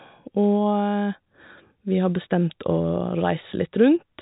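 Speech with no technical fault to report. It carries the narrow band of G.711 telephone coding, with nothing above about 3.8 kHz and at most a faint coding noise riding under the signal.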